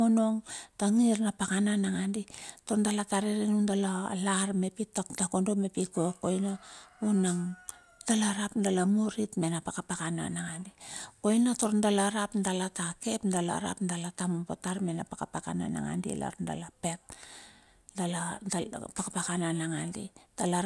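Listening closely to the speech recording, nothing stood out as a technical problem at any point.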